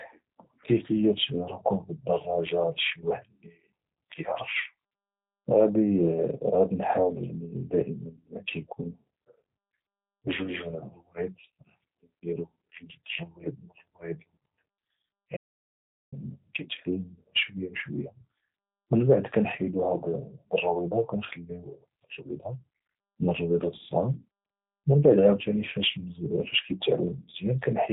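G.729 codec damage runs through this whole speech clip. The speech is rebuilt from a vocal tract filter, pitch prediction and a few pulses per frame, which fits an 8 kbit/s G.729A stream. Nothing passes above about 3.8 kHz, and the voice sounds plainly rough and synthetic. An audio dropout to silence runs from 15.37 to 16.12 s, just before "كيتعلم شويه بشويه". For about 0.76 s the sound falls to silence with no room tone, and whatever was said there is lost. The likely cause is a brief loss of input, with silence written in its place.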